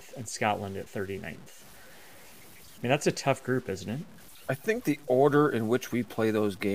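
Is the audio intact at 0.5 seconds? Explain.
No. At 0.5 seconds the speech carries low bit depth without dither, present across the whole clip. The grainy, signal-following distortion is likely from truncating to about 7 bits with no dither. The rounding error sits only about 25 dB below the speech, so quiet passages turn gritty and the softest parts sputter or drop out. On a waveform the quiet stretches look like visible stair steps, and a spectrogram shows broadband grit that rises and falls with the speech instead of a steady noise floor.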